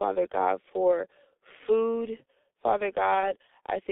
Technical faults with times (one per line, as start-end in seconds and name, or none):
0.00-3.91 G.723.1 codec
3.20-3.33 VoIP packet loss concealed by the speech codec